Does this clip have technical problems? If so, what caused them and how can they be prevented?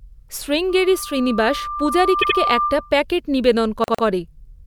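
Yes. Two kinds of fault affect this speech clip.

A loudspeaker feedback squeal runs from 0.69 s to 2.97 s. It is a single tone near 1.2 kHz. It swells over about a second and a half until it is roughly as loud as the speech. The microphone was picking up a loudspeaker it fed. At that frequency the loop gain passed one, so the tone kept feeding itself. Prevent it by lowering monitor gain, moving the microphone away from the speaker, or notching 1.2 kHz.

Repeated frames cause two stutters. From 2.21 s to 2.37 s, a 78.4 ms block plays three times in total. This adds 156.7 ms, which fits a run of three frames. From 3.83 s to 4.04 s, a 104.5 ms block also plays three times. This adds 209.0 ms, which fits four frames. The same compressed data was written or sent more than once. Prevent it by fixing the buffering or packet handling so each frame is delivered exactly once.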